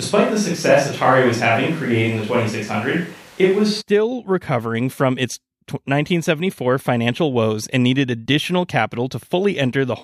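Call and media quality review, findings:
Switch to a distant microphone, 0.00 to 3.80 s, already under way at clip start. Speech sounds roomy and hollow with a thin low end. Room noise sits about 30 dB below the speech, and the level is roughly unchanged. There is an abrupt return to a close, dry pickup just before "recovering from its". The close mic likely dropped out and the feed fell back to a far-field pickup such as the camera mic, which captures more room reflections and less bass.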